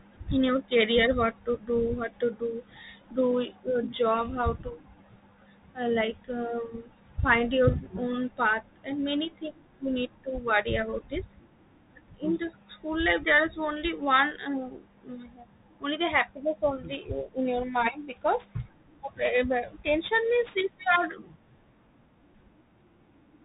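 The whole recording passes through a Bluetooth CVSD headset codec. Nothing above 3.8 kHz survives, so the speech sounds narrow and muffled. The one-bit delta coder's step size lags on fast, loud rises. Sibilants turn scratchy, and a granular hiss sits underneath. The damage fits a 64 kbps CVSD link.

From 16.81 s to the end at 23.45 s, sample clock jitter sets in. The converter's timing wanders by around 10 microseconds. Steep waveform slopes suffer most. A rough hiss, roughly 20 dB below the speech, rides on loud and bright sounds and vanishes in pauses.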